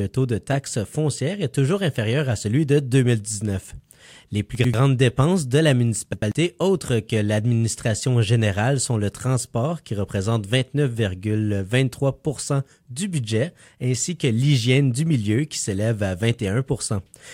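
At 4.55 to 4.74 s and again at 6.13 to 6.32 s, chunks play out of order: a 93 ms block arrives one slot late and swaps with its neighbour, leaving three hard joins and a jumbled moment. Unlike a dropout or stutter, nothing is missing or repeated.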